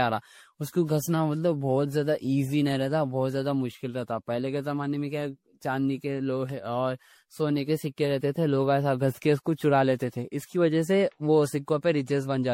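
Generation loss throughout: the speech sounds swirly, hollow and smeared, attacks blur, nothing above 16.5 kHz; likely about ten stacked MP3 re-encodings near 64 kbit/s.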